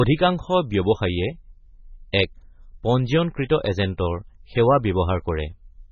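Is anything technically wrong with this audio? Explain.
Yes. Throughout the speech the sound is watery and swirly, with nothing above 6.8 kHz. This is likely heavy MP3 compression. Starved of bits, the encoder removes the treble and lets weak frequency lines flicker between frames, which fits a bitrate near 16 kbps.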